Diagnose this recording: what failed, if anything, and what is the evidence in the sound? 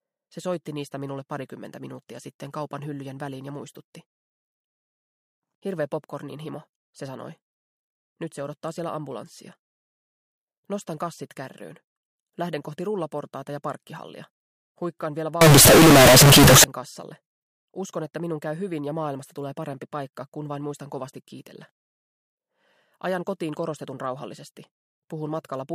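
The sample-format conversion stage likely failed, with 32-bit float samples read as 32-bit integers: a float read as integer fault. From 15.41 to 16.64 s the waveform turns nearly square at an almost fixed, high level, so the sound becomes very loud and harsh, with background noise as strong as the foreground.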